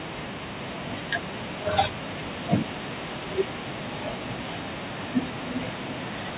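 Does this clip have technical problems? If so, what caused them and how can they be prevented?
No, nothing stood out as a technical problem on listening, and the speech carries the narrow, telephone-like sound expected of a G.711 call path that passes nothing above 4 kHz.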